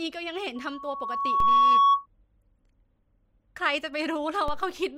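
At 0.56 s a loudspeaker feedback squeal begins: a 1.1 kHz tone swells over roughly a second to about 15 dB above the speech, then stops at 2.06 s, a bright horizontal line on a spectrogram. At 1.40 s and 4.48 s, a DC step shifts the waveform's zero line, heard as a low thump, then relaxing back as a roughly 2 Hz high-pass decay.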